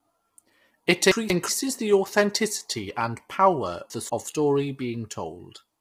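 The speech is likely coded with low-delay AAC compression such as AAC-ELD, whose short frames resolve pitch harmonics poorly; heavy damage here fits a bitrate near 24 kbps. Throughout, the voice sounds rough and grainy, with noise between harmonics and a synthetic top band.

From 1.12 to 1.49 s, and again from 3.90 to 4.27 s, chunks play out of order: a 186 ms chunk arrives one chunk late and sounds after the chunk that should follow it. Each moment sounds jumbled.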